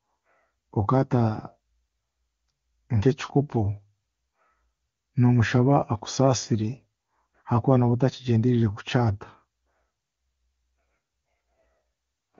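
No faults here: the speech comes over an AMR wideband (HD Voice) link whose clarity fits one of its higher rates, around 23.85 kbit/s.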